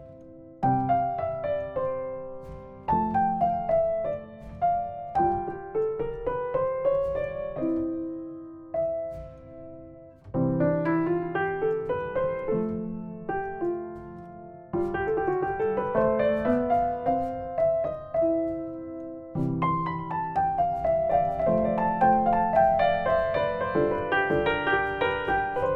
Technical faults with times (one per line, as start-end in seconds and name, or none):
21.12-25.76 doubled audio track